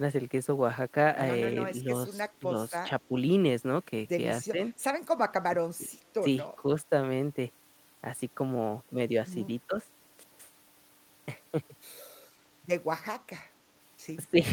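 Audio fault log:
2.22–2.42, 3.08–3.15, 4.42–4.60, 5.48–5.61, 5.78–5.94, 6.62–6.68 and 14.26–14.42 s, speech suppressed in double talk: the speech briefly sags in level, mostly by about 5 to 10 dB, with a deeper hole of about 15 dB near 5.8 s and the worst, about 20 dB, right at the end. Each dip lasts a fraction of a second. This is likely an echo canceller mistaking the talker for far-end echo while both sides spoke, and ducking both.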